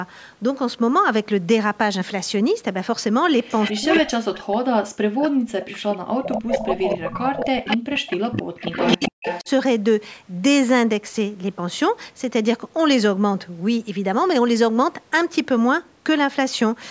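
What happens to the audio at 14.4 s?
At 14.4 s the speech carries on intact, with no dropout, glitch or distortion, only the ordinary band-limiting of call microphone processing.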